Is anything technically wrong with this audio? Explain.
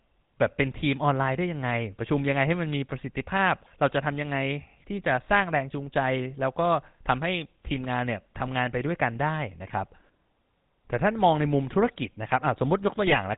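Yes. The speech runs through a GSM full-rate codec for the whole clip, and a burst of GSM bit errors hits near the end.

GSM full-rate codec, throughout: the sound is band-limited to 4 kHz and has a plainly audible buzzy, gravelly roughness. This fits the 13 kbps full-rate coder, which drives a vocal-tract filter with a sparse, regularly spaced pulse excitation and discards the upper band.

GSM bit errors, 13.06 to 13.21 s: the speech breaks into squawks, pops and a gargling texture. Corrupted filter, pitch and gain parameters distort the spectrum and spike the level frame by frame. The 0.15 s span fits a handful of damaged 20 ms frames.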